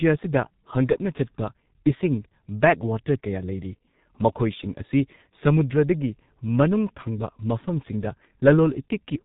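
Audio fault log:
throughout: G.723.1 codec. The speech is heavily muffled, with nothing above 3.8 kHz, and sounds hoarse, with smeared consonants. That fits a low-rate telephony coder running near 6 kbit/s, which rebuilds the voice from a coarse model updated only every 30 ms frame.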